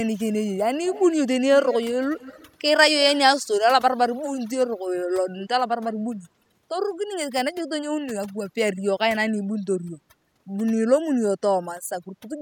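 The whole clip has overdone noise removal. The noise reducer was pushed so hard that bands near its noise estimate get gated out, taking quiet parts of the speech too. The background drops and breaks up into twinkly specks.

Early on there are three bursts of echo leak, at 0.85 to 1.06 s, 1.63 to 1.75 s and 2.16 to 2.51 s. Each is a copy of the speech trailing about 212 ms behind, roughly 15, 10 and 20 dB under the voice. It's likely an echo canceller on a speakerphone letting some of the far side slip back.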